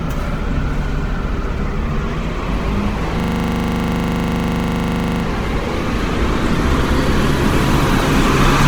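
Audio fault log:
throughout: Opus compression. Tones turn grainy, rough and noisy, with plainly audible damage but little swirling and few spectral gaps, and the full bandwidth is kept. This is likely low-rate Opus in its CELT music mode, around 16 kbps, filling starved bands with folded or noise content.
3.2–5.24 s: system hang loop. The sound locks into a steady buzz at 25 Hz as one 40 ms fragment repeats exactly 51 times. The system froze while playback kept cycling a ring buffer, which fits a buffer of about 40 ms.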